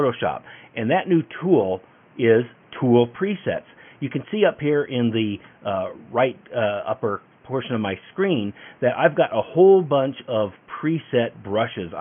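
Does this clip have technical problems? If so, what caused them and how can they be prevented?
No, there are no technical problems to hear in this audio. With nothing going wrong, there is no cause to trace and nothing that needs preventing.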